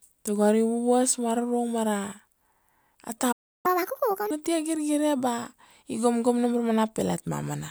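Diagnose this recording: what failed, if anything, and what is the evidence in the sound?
The speech cuts out abruptly at 3.32 s and stays silent until 3.66 s, a gap of about 0.32 s in mid-flow with no fade on either side. This is a playback stall at the playback or buffer stage. The output went dead because the player most likely ran dry of decoded audio or had its output thread blocked, and it produced nothing until data arrived again.

Right after the gap, from 3.66 s to 4.31 s, the speech runs audibly fast and high, chipmunk-like, then returns to normal pace and pitch. This is catch-up at higher speed, also in playback. To recover the time lost in the stall, the player resampled its backlog at 1.5 times normal speed. Because resampling changes rate and pitch together, the pitch rose about seven semitones for that stretch.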